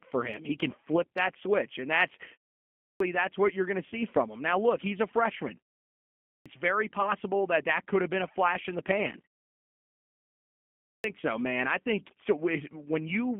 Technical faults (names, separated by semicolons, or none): G.729 codec; clipped start after a pause; VoIP packet loss concealed by the speech codec